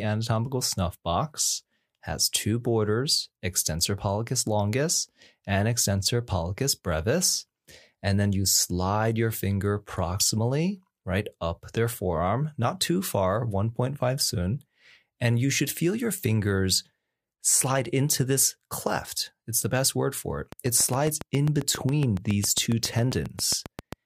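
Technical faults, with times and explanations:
20.52–23.94 s, train of clicks: after "best word for it", roughly thirty near-identical clicks at a regular 7.35 per second, well above the speech, likely external interference.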